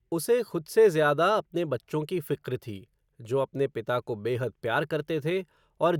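No technical faults can be heard anywhere in the speech.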